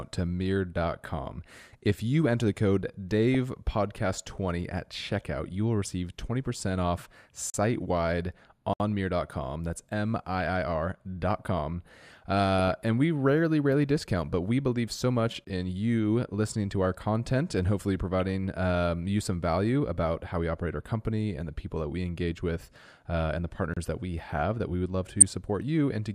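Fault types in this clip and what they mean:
DAB burbling: Brief blips of noise break over the speech at 3.34 s just after "you enter the code", at 10.4 s, at 12.6 s just before "and we rarely rarely", at 18.2 s between "our content and hopefully" and "um you some value", and at 23.2 and 25.2 s. A small share of bit errors got past DAB error correction into the MP2 data, so single sub-bands got short blips of noise.
block of digital silence: Short holes cut the speech at 7.50 s for 40 ms, 8.73 s for 66 ms, 15.45 s for 20 ms and 23.74 s for 29 ms. The shortest sound almost like a tick and the longest like a clear dropout. Each is a run of samples replaced by zeros, so the sound stops and restarts abruptly with no fade, as when the output buffer is not filled in time.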